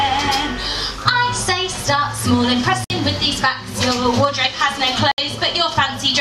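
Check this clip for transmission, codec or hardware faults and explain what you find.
Two dropouts show up. Blocks of digital silence at 2.84 to 2.90 s and 5.11 to 5.18 s: likely the output wasn't filled in time, so roughly 56 and 66 ms holes open, cutting out and back with hard edges.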